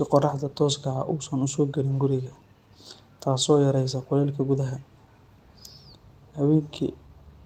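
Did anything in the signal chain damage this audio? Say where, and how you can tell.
No, I can't hear any damage from the signal chain in this speech recording. Nothing from capture through to playback leaves a mark I could tie to a particular stage.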